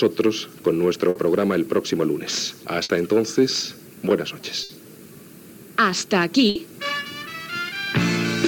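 A burst of packet loss strikes at 1.09 to 1.18 s, 2.83 to 2.92 s, 4.63 to 4.72 s and 6.49 to 6.58 s. Each time, the receiver stretches the last sound for 60 ms while fading it. Then 60 ms of audio is skipped, and playback jumps ahead.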